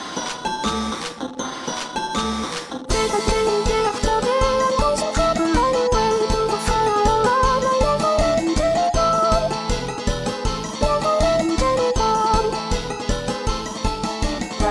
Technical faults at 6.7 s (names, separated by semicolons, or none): none